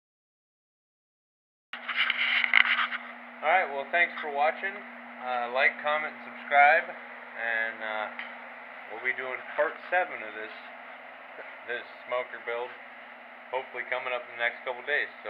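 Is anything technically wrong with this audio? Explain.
Yes, there's a cut-off start. The first 1.73 s are dead digital silence, and then the sound just appears at 1.73 s already in full swing, with no natural attack or fade-in at all. That happens when the recording or stream kicks in late: whatever was playing had already begun before capture started, so you land partway into it and the beginning is simply missing.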